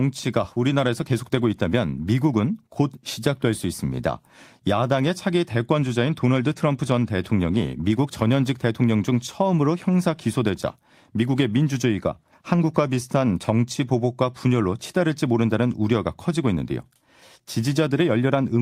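No technical faults can be heard anywhere in this speech recording. There are no moments that call for a time stamp.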